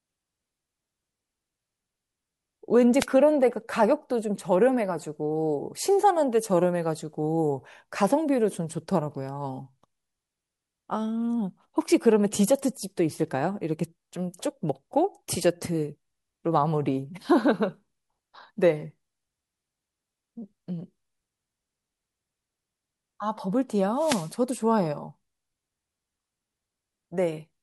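At 2.99 to 3.06 s and again from 23.96 to 24.33 s, a wireless microphone noise hit breaks through the speech as a brief hiss of static as the radio link fades and receiver noise surges. A digital dropout would leave a gap of silence, while these bursts add noise over the sound.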